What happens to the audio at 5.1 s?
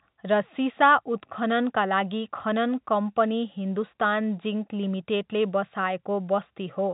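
Nothing goes wrong at 5.1 s: the speech carries on intact there, with the narrow telephone band of G.711 coding and no dropout, click or distortion at that point.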